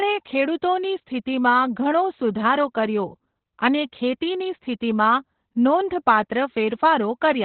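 Opus voice compression affects the whole speech clip. Nothing is audible above about 4.2 kHz. The codec has fallen back to narrowband and is running its linear-prediction speech coder alone. The damage is heavy, which points to a bitrate near 8 kbps. At that rate the excitation is coded coarsely. The voice sounds muffled and hoarse, with a thin, slightly robotic edge. Sibilants and breath detail are largely gone.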